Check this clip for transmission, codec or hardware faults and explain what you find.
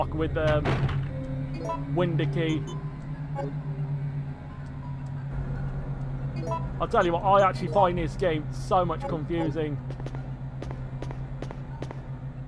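No transmission, codec or hardware faults can be heard here.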